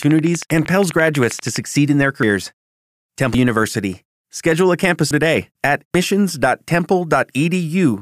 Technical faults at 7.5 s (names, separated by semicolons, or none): none